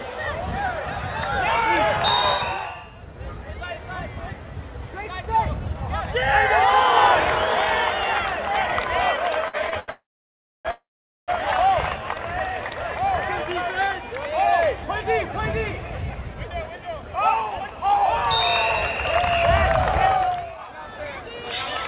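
From 9.48 to 9.90 s the audio stutters: repeated stalls, three gaps up to 83 ms, where late packets emptied the jitter buffer and the last sound was stretched to fill.

Two call audio freezes follow, 9.90 to 10.67 s and 10.71 to 11.30 s. The sound hangs, fades, then goes silent for about 0.64 s and 0.48 s before resuming, likely from packets held up in transit.

Jitter buffer speed-up runs from 14.59 to 18.03 s at 107% and from 20.25 to 21.44 s at 110%. Short pitch-period slices are cut to shed surplus delay, roughly 0.3 s and 0.15 s, so the audio sounds hurried at unchanged pitch, all within the narrowband G.711 call path that stops at 4 kHz.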